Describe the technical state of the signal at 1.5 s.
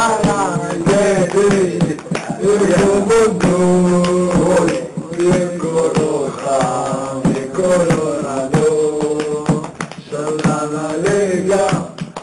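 At 1.5 s the signal is intact, with no dropout, distortion, glitch or other technical fault at that moment.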